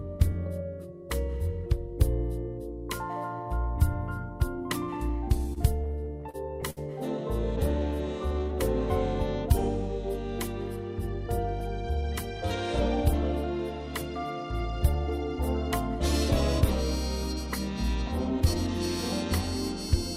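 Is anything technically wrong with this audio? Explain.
Yes, there are three timing faults, all from the receiver's jitter buffer.

From 5.53 to 6.79 s there are repeated stalls (stutter). Packets arrived late, so the buffer ran dry eight times. Each time the receiver extended the last sound to cover the wait, for 195 ms in total and at most 65 ms per gap, which is about 16% of that span. Nothing is lost, but the audio hitches and drags. On a spectrogram the gaps show as short smeared, horizontally stretched patches. A waveform shows repeated cycles where the sound was held.

From 7.79 to 8.57 s there is a jitter buffer slow-down. With the buffer running low, the receiver repeated individual pitch periods to rebuild its reserve. That added 95 ms and brought playback to about 89% speed with the pitch unchanged. The sound is drawn out. A spectrogram shows stretched features with harmonics at the same height, and the waveform shows duplicated cycles.

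From 11.27 to 12.37 s there is a jitter buffer speed-up. The buffer held more audio than its target, so the receiver trimmed out short runs of pitch periods, roughly 40 ms in all. Playback runs at about 103% speed at the same pitch. A spectrogram shows compressed timing with harmonics in place. The waveform has missing cycles spliced cleanly together.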